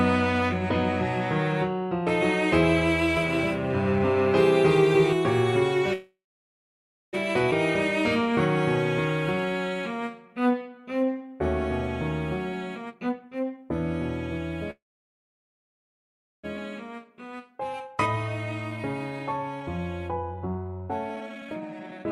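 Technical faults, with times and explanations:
3.17–5.13 s, doubled audio track: a second full-band copy of the sound runs roughly 0.3 s behind the original at about 5 dB lower, with no reverberant tail or room colour of its own, and it cuts in and out abruptly at both edges. That clean, fixed lag points to the same audio likely being mixed in twice, either picked up again through a slower path or left as two misaligned copies by an edit.
5.93–7.15 s, call audio freeze: the sound stalls, and a short fading fill continues the last moment before it falls to silence for about 1 s. It then resumes exactly where it stopped. The whole stall lasts about 1.2 s, and nothing is lost, only pushed later. This is likely packets arriving late and the jitter buffer running dry, so the receiver filled the wait with concealment and then silence.
7.51 s, skip ahead: playback jumps forward with an almost seamless join, and roughly 0.7 s of audio simply vanishes between the two sides. 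Later audio was already queued when a stretch was dropped, either lost in transit or discarded by an overfull jitter buffer. Here it also wipes out much of the delay the freeze just before had built up.
9.35–11.38 s, jitter buffer slow-down: the sound drags at about 85% speed but keeps its pitch, with stretched sounds. The jitter buffer was running short, so the receiver repeated single pitch periods and slivers of pauses over and over, adding about 0.3 s to build back a reserve.
12.53–13.64 s and 16.57–22.04 s, jitter buffer speed-up: in both stretches the sound rushes along at unchanged pitch. The first runs at about 138% speed and loses roughly 0.4 s. The second runs at about 128% and sheds roughly 1.5 s. The buffer held more than its target, as after the stalls, so the receiver repeatedly removed short pieces one or a few pitch periods long to bring the delay back down.
14.71–16.45 s, call audio freeze: a brief fading fill gives way to about 1.65 s of silence, and the sound then carries on from the same point after a total hold of about 1.7 s, with nothing missing. 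This likely comes from delayed packets emptying the jitter buffer, so the receiver bridged the wait and inserted a gap rather than dropping audio.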